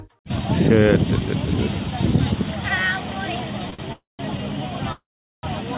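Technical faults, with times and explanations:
3.70 s and 3.74 s: short stall from a late packet, twice in a row. Each time the jitter buffer ran dry and the receiver stretched the last sound, by 21 ms and then 44 ms, before resuming at the same point. Nothing is lost, but the sound is held too long.
3.93 to 4.21 s and 4.92 to 5.45 s: call audio freeze. The audio stops, then resumes where it left off. The likely cause is packets held up in transit that emptied the jitter buffer, which filled the gaps of 264 ms and 511 ms with a fading continuation, then silence for about 170 ms and 420 ms. Nothing is missing; the gaps push the rest later.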